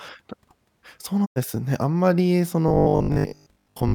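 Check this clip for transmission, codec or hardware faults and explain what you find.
Two faults are audible in the speech. From 1.24 to 1.38 s, a digital broadcast dropout fades the sound out over 20 ms. About 96 ms is lost when corrupted frames mute the receiver, leaving a flat silent gap in the waveform. From 2.68 s to the end, there is robotic sound from repeated short buffers. A rigid 50 Hz metallic buzz replaces most of the audio, likely from a 20 ms buffer looping. On a spectrogram it shows as evenly spaced harmonic stripes.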